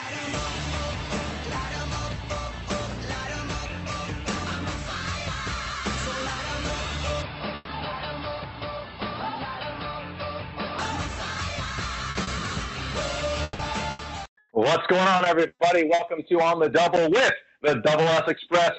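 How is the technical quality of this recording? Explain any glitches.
The recording has several clear glitches: a stretch of narrowed, duller audio and three kinds of packet-loss damage, all heard through a call path whose coding and upper band limit fit Opus at around 32 kbps with 8 kHz audio bandwidth.

From 7.22 to 10.79 s the input switched to a poorer device, likely a second microphone or a headset's call profile. Nothing above 5.2 kHz gets through, so the sound turns boxy and dull, then clears again at 10.79 s. The level stays the same and there is no silence at the switch, but a new noise floor appears about 30 dB below the signal. On a spectrogram the energy above 5.2 kHz is abruptly blanked for that span.

A burst of packet loss runs from 7.55 to 7.70 s, inside the narrowed stretch. About 120 ms of audio never arrived, and the receiver filled the hole by extending the last sound and fading it out. 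The result is a held buzz or thinning hiss, after which the audio resumes further along with that piece missing. The waveform shows a smooth, repetitive, decaying section instead of the natural envelope, and the spectrogram shows smeared, unchanging partials.

Short concealed packet loss occurs at 12.11 and 12.23 s, each about 40 ms. Each time, a few packets missed the decoder. The receiver patched the gap by continuing the previous sound's pitch or noise shape, then blended back into the real signal. Each event is a quick smear or wobble, and a brief transient can disappear. On a spectrogram these are tiny horizontal smudges where detail briefly freezes.

Repeated packet loss, giving a robotic sound, spans 13.43 to 16.02 s. Five separate gaps totalling about 440 ms were concealed, the longest 160 ms, so roughly 17% of that stretch is synthetic fill. Each patch is followed soon by another, which makes the audio choppy with pieces missing. 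The waveform shows repeated flattened, periodic chunks, and the spectrogram shows a series of frozen, streaky blocks breaking up the normal texture.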